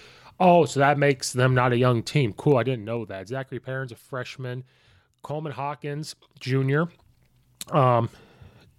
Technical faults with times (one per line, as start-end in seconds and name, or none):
2.46-3.11 zipper noise
5.85-7.15 zipper noise